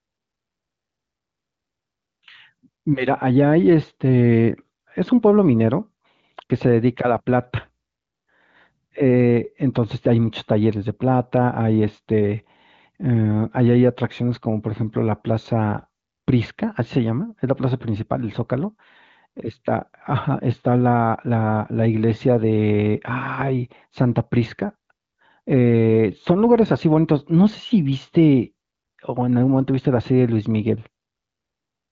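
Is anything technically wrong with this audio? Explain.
No, nothing technically wrong is audible here.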